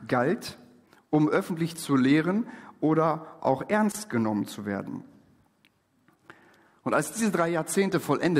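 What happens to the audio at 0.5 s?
Nothing goes wrong at 0.5 s; the audio at that moment is intact, with no dropout, click, distortion or other fault to be heard.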